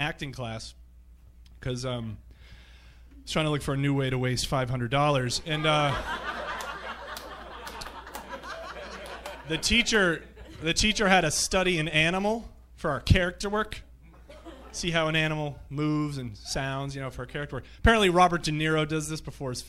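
No technical faults are audible.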